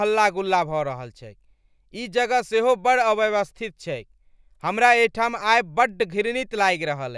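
No technical faults can be heard anywhere in the speech.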